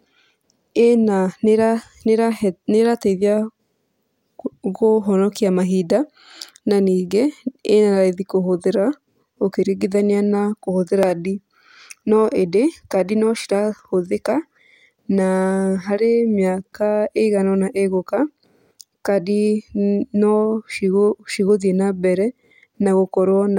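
At 11.03 s, damaged data in the compressed stream throws the decoder out of sync while it hunts for the next frame, leaving a brief glitch in the speech.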